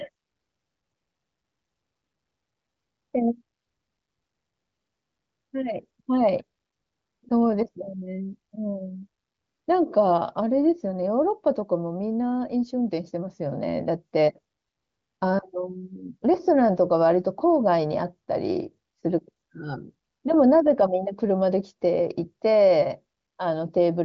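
No technical faults are audible.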